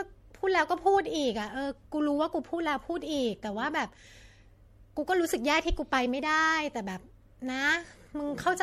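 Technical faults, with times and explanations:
throughout, generation loss: The speech was most likely decoded and re-encoded with MP3 about five times, each pass re-quantising on a shifted frame grid so the errors stack up rather than cancel. The top end stops at 16.4 kHz, and the texture fits a chain around 64 kbit/s. The result sounds swirly and hollow, with smeared, watery sibilants and softened consonant attacks, more degraded than a single encode at that rate would sound.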